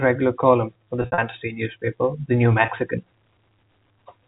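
Speech over a G.711 telephone path has packet loss with pitch repetition at 1.02–1.18 s, after "column for the". 120 ms drops out in gaps spread over 160 ms (longest 60 ms), each filled by a repeated pitch period that fades out, the shorter gaps sounding held and buzzy and the longest fading into silence. A 20 ms gap at 2.66–2.68 s buzzes briefly.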